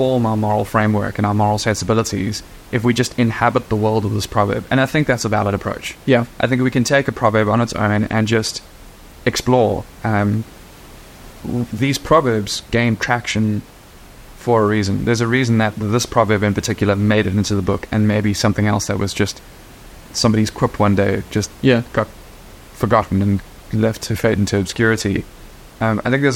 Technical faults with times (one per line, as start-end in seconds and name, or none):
none